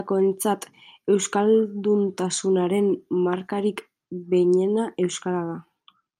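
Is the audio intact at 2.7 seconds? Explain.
Yes, the speech at 2.7 seconds is intact, with no dropout, click, distortion or other fault at that moment.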